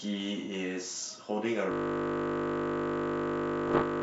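Speech over what sounds like a G.722 wideband link, and it goes wrong at 1.72 s. From there to the very end the audio locks into a system hang loop: one 20 ms slice repeats exactly, over a hundred times, which you hear as a steady buzz at 50 Hz instead of any further speech. That's the signature of the machine or driver freezing while the sound hardware keeps replaying the same ring buffer, and the short loop length is why it comes across as a buzz rather than a stutter. On top of that, between 3.68 and 3.83 s there's a cluster of pops and rough, grainy bursts with brief jumps in level. Those are bit errors on an ADPCM link, at a rate somewhere under one percent. Every flipped bit throws off the decoder's step size and prediction, so each hit smears on for a few milliseconds instead of being a single click.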